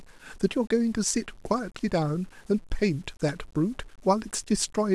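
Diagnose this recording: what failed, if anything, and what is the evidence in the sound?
Sample-format conversion is the likely failure: low bit depth without dither across the whole speech clip. Quiet syllables turn gritty and decay tails sputter, with distortion around 35 dB below the signal that tracks the level. This fits truncation to 8 bits, where rounding error follows the waveform.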